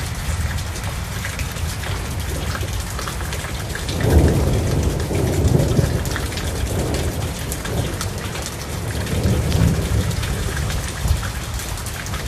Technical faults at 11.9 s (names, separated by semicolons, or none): MP2 compression; DAB burbling